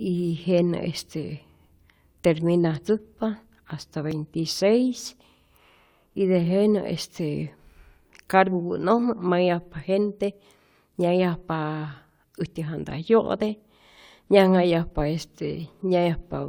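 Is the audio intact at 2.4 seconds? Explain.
Yes, the speech at 2.4 seconds is intact, with no audible fault at that moment.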